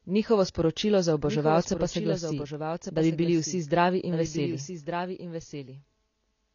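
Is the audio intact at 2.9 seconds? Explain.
No. At 2.9 seconds the speech carries a second copy of itself, trailing about a second behind and roughly 10 dB quieter. It is full-band, with no decay or room colour, so it sounds like a separate layer rather than an echo. This doubled audio track runs through the whole clip. The likely cause is the same signal reaching the mix twice, once directly and once through a slower path that holds it back by that fixed delay.

The speech at that moment also sounds dull and smeared, with a warbling, fizzy edge on sustained sounds and sibilants. Nothing is present above 6.9 kHz, which takes away the air and crispness. This is plainly audible AAC compression, also present throughout, and the damage fits AAC-LC at a low bitrate of around 24 kbps. At that rate the encoder pulls the cut-off down and quantises the remaining spectrum coarsely. That leaves gaps or substitute noise in some bands.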